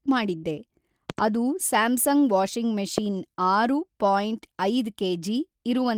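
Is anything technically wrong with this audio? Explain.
Yes, the speech has two kinds of fault.

From 0.37 to 0.46 s, the sound holds as a fading buzz or hiss for about 56 ms, then jumps ahead with about 60 ms missing. This is a burst of packet loss that the receiver concealed by extending and fading the last sound.

At 1.10 to 1.21 s, two sharp pops land on the speech, roughly 15 dB above it. At 2.98 to 3.00 s, a single louder pop of roughly 20 dB comes just before "ಆರು ಪಾಯಿಂಟ್". These loud pops are likely voltage spikes from a plug, switch, static or driver glitch, added on top of the continuing speech.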